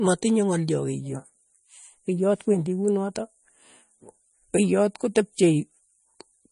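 Throughout the speech the sound is watery and swirly, with metallic chirps on s sounds, and nothing reaches above 10.5 kHz. The likely cause is MP3 compression at a low bitrate, around 40 kbps, cutting the treble and letting weak frequency lines flicker between frames.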